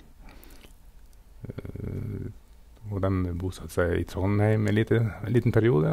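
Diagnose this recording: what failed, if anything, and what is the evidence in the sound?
Converter clock failure. From 1.51 s to the end, periodic clock jitter near 100 Hz puts sidebands around the speech. It sounds rough and metallic.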